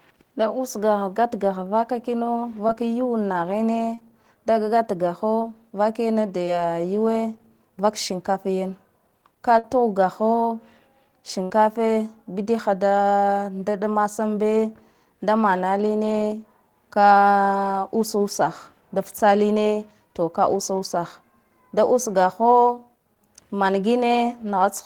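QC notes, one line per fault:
2.67, 3.94–3.98, 5.41, 6.45–6.48 and 23.15 s: short concealed packet loss. Between 10 and 30 ms of speech never reached the decoder, which extrapolated the preceding sound, leaving brief smears or wobbles.
9.59–9.64 and 11.43–11.51 s: burst of packet loss. About 50 and 60 ms were lost in a row. The receiver prolonged the last sound while fading it, so it becomes a held buzz or fading hiss, then jumps ahead with that stretch gone.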